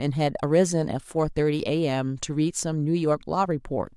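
No audible technical faults.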